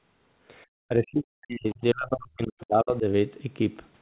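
Speech suppressed in double talk runs from 0.88 to 3.05 s: the voice sinks, thins and breaks up for about two seconds, dropping as much as about 40 dB. The likely cause is an echo canceller that mistook the talker for loudspeaker echo and attenuated both.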